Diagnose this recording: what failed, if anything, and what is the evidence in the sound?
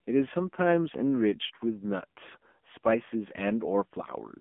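AMR narrowband mobile codec damage runs throughout the speech, at the codec stage. Nothing survives above 3.6 kHz, and the band sits at roughly 200 Hz to 3.5 kHz. The heavy buzzy, synthetic quality of the vocal-tract model fits a low mode near 6.7 kbps.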